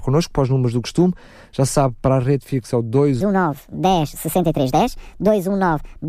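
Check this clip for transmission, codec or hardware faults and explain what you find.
One fault is present. From 3.21 s, right after "rede fixa é o", to the end, the speech shows a wrong sample rate. It is played 1.5 times too fast with no conversion, which fits 32 kHz audio played at 48 kHz. Speech sounds hurried and raised by about 7 semitones.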